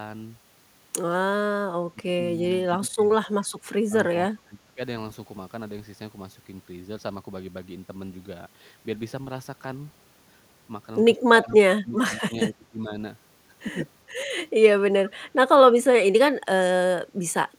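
The speech dips abruptly at 1.93 s, 2.8 s and 4.29 s, then again from 11.42 s, 11.67 s, 12.48 s and 15.29 s. The drops range from brief clips to roughly half a second, the deepest near 12 s falling by about 30 dB. This is speech suppressed in double talk, likely caused by an echo canceller that could not separate the near voice from loudspeaker echo while both sides talked, and so turned both down.

At 11.48 s, inside that cluster, a faint scrap of delayed voice slips through for a moment, trailing the speech by 411 ms and sitting about 30 dB below it. This is an echo leak, likely where a far-end loudspeaker reached its microphone and the canceller let a residue back down the line.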